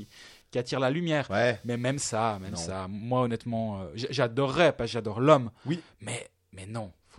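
From the start to 2.60 s there is computer activity noise under the speech. It is a buzzing chirp made of fast pulses, around 300 per second. It sits low, roughly 35 dB below the speech. It does not follow the speech. It tracks the computer's workload instead. Shifting processor or graphics load pulls on the ground line that the audio circuit shares. That ground movement leaks straight into the signal as this pulsing noise.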